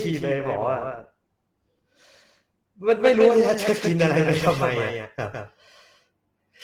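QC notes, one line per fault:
throughout, doubled audio track: a second full-band copy of the speech trails the original by roughly 150 ms at about 5 dB down, with no decay or room colour, so it reads as a hard slapback, likely from a slower second capture path.
throughout, Opus compression: the speech sounds muffled and hoarse with a grainy, rough edge, plainly audible damage that fits Opus running in its hybrid speech mode at a low bitrate around 16 kbps, likely where it had too few bits and filled bands with noise.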